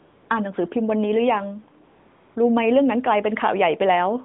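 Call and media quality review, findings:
AMR comfort noise, 0.00 to 0.30 s. The real background is replaced by smooth, steady synthetic hiss. No speech frames for 295 ms. Probable component: sender voice activity detection plus receiver noise generator.

AMR comfort noise, 1.84 to 2.36 s. The same even fill lasts 520 ms and switches in and out against the live background. The pause was judged silent, and the receiver rebuilt the noise from a coarse level and spectrum description, over a 150 Hz to 3.6 kHz AMR-NB line.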